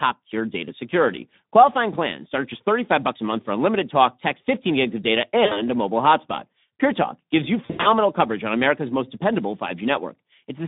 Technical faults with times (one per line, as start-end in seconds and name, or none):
0.00-10.68 Speex codec
5.45-5.62 VoIP packet loss concealed by the speech codec
7.66-7.89 VoIP packet loss concealed by the speech codec